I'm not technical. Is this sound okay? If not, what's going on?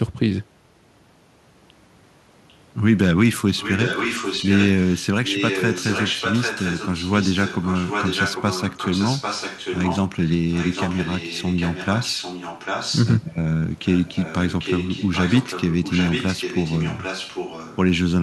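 No. This speech has an echo leak. From 3.57 to 5.06 s, 5.25 to 10.31 s, 10.51 to 13.18 s and 13.85 to 17.77 s, a second copy of the voice follows the first, about 0.8 seconds behind. Up to about 10.3 s that copy is fairly loud. After that it is quieter. The likely cause is a far end playing the call on a loudspeaker, with its microphone picking it up and sending it back.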